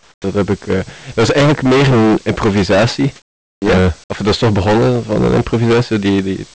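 Hard clipping runs through the whole speech clip. The signal is driven about 24 dB past what the stage can pass, so roughly a fifth of the samples are cut flat. Every loud syllable carries a harsh, buzzy fuzz, with harmonics spread well up the band. The call path cuts everything above 8 kHz, which caps that fuzz.

From 0.00 to 0.24 s there is comfort noise in place of the background. A steady, featureless hiss fills those 239 ms, about 10 dB quieter than the real background it replaces. It is likely synthetic noise generated at the receiver while the sender's discontinuous transmission held back the pause.

At 0.22 to 0.24 s the onset is clipped by the voice detector. About 20 ms of the speech onset is missing and replaced by that same noise, so the first sound starts abruptly, without its soft lead-in. The likely cause is that the sender's voice detection reacted late to speech resuming.

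From 3.16 to 3.62 s there is comfort noise in place of the background again. For 460 ms the natural room detail drops out, replaced by flat noise about 11 dB lower. The gap is audible as a dip into sterile hiss before the speech returns.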